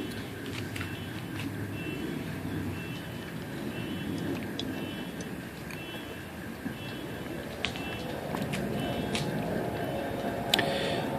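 No technical faults are audible.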